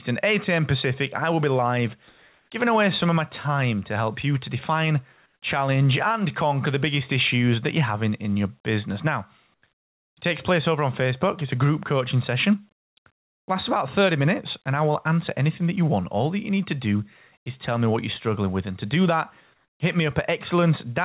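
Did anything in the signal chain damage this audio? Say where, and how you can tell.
Yes. Comfort noise in place of the background, at the call-processing stage: pauses at 2.08–2.5, 5.26–5.42 (after "help you to define"), 9.54–9.62, 12.8–12.96, 13.16–13.48 and 19.54–19.8 s turn to steady, featureless hiss, shifting level by about −21 to +9 dB. Likely discontinuous transmission: the sender goes silent and the receiver synthesises noise.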